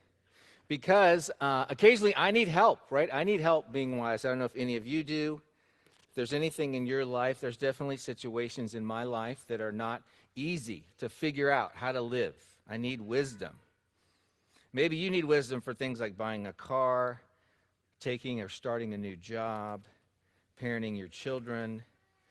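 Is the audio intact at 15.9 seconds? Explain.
Yes, the audio is intact at 15.9 seconds, with no dropout, glitch or other fault at that point.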